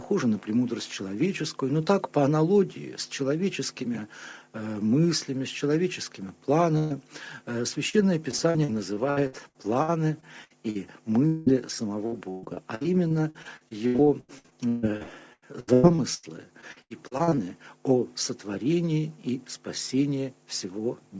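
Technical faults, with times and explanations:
6.78–6.93 s, burst of packet loss: about 120 ms of consecutive packets went missing, so the receiver stretched the last sound out and faded it before the audio jumps ahead.
7.89 s, short concealed packet loss: roughly 40 ms never reached the decoder in time, and the patch from the preceding sound leaves a brief smear or wobble.
8.31–10.77 s, 12.06–16.25 s and 16.61–17.45 s, repeated packet loss (robotic sound): gaps recur every fraction of a second, up to 140 ms long, and the constant patching makes the sound choppy with pieces missing.
11.27–11.48 s, long network dropout: about 200 ms is replaced by a decaying continuation of the last sound with no silence reached, likely from a brief network stall.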